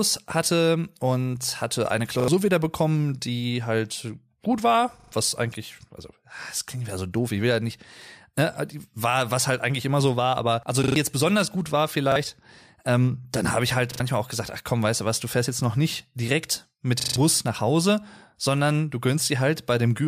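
At 2.2, 5.0, 10.84, 12.12, 13.92 and 17.0 s the speech stutters as a repeated buffer: playback ran dry and the last block, a repeating segment that fits a 40 ms buffer, was played again one to four extra times, the longest at 17.0 s. Each burst sounds like a brief judder, and the speech skips ahead by up to about 0.15 s. The waveform shows identical 40 ms blocks with hard seams, and the spectrogram shows matching columns with vertical edges at each join.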